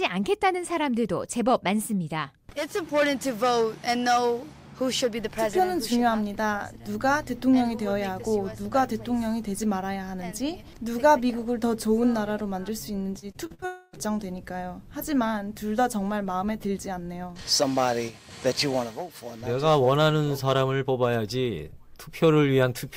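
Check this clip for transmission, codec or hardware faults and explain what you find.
Two network faults sit back to back near 13 s.

From 13.19 to 13.64 s there is repeated packet loss, heard as a robotic sound. Audio keeps going missing in short holes, the longest about 43 ms. Each hole is filled by stretching the last sound, and the next hole soon follows. About a third of this span is patched rather than real. The result is choppy, with fragments dropped out.

From 13.66 to 13.95 s comes a longer break. The sound smears into a fading buzz or hiss for roughly 0.27 s. It never falls to silence before the audio returns, and the original material in that stretch does not come back. The likely cause is a long network dropout, where nothing arrived and the receiver kept extending the last sound until the stream resumed.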